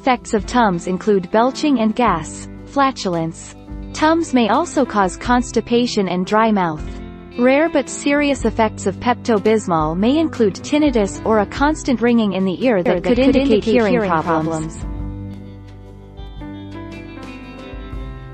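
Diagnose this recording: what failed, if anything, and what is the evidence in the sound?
A compressed frame was stored or sent twice, so one 26.1 ms block plays again at 6.83 to 6.86 s, heard as a brief stutter.

From 12.86 to 15.34 s a doubled audio track appears, likely from a second, slower capture path: a dry copy about 5 dB down, roughly 150 ms late, starting and stopping abruptly.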